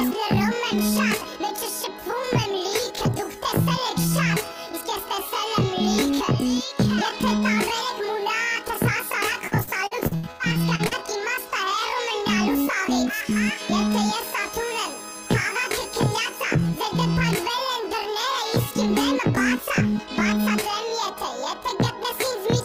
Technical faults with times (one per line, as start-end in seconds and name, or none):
9.47-10.94 repeated packet loss (robotic sound)